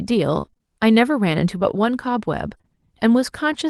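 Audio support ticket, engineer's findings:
Repeated packet loss (robotic sound), 0.41–0.61 s. Choppy, robotic stretch where five gaps land within about 0.2 s, longest near 26 ms, roughly half the span patched. Probable component: network/jitter buffer feeding the decoder, likely upstream loss bursts. Concealment extends the last pitch period each time, so real and synthetic audio alternate. Spectrogram: repeated smeared harmonics with flat, frozen frequency tracks between ragged onsets. Waveform: periodic copy-like cycles interrupting the natural envelope.

Short concealed packet loss, 2.57–2.61 s and 2.61–2.66 s. Two back-to-back holes of about 20 ms each, heard as a brief smear and wobble. Probable component: jitter buffer/decoder packet loss concealment in the Opus path, whose band edge near 12 kHz fits about 24 kbps. Missing frames are regenerated from the preceding sound and cross-faded back. 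Spectrogram: short blurred patch with held harmonics or shaped noise. Waveform: slight envelope dip or discontinuity at the joins.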